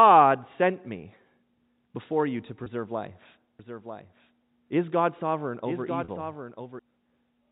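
At 2.64 s, just after "before you to", a packet loss with pitch repetition leaves about 20 ms of audio missing. The last pitch period is repeated to fill it, so the sound briefly holds on a faintly buzzy tone. On a spectrogram this shows as a short stretch of evenly spaced, frozen harmonic lines.

From 3.59 s to 6.79 s a doubled audio track sits under the audio. A full-band copy roughly 10 dB quieter trails by about a second, likely from a second, slower capture path. It has no reverberant tail and begins and ends abruptly, so the waveform shows a faint duplicate envelope that switches on and off sharply.

At 6.04 s, while the copy is still running, a second packet loss with pitch repetition covers about 40 ms. The repeated cycle is audible as a longer held buzz that fades before the sound returns through a brief cross-fade. The waveform shows identical repeating periods tapering in amplitude, all within the telephone band, which stops at 4 kHz.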